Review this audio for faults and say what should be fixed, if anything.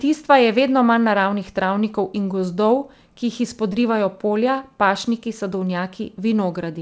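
At 3.73 to 3.75 s, just before "polja pašniki", there is a short concealed packet loss. About 20 ms of audio never arrived, and the receiver bridged the gap by extending the preceding sound before fading back into real audio. This is heard as a brief smear or wobble. On a spectrogram, the sound smears flat across the gap, within a band that stops at 8 kHz from the call codec. To prevent it, give the jitter buffer more headroom or add forward error correction so late or lost packets can be recovered.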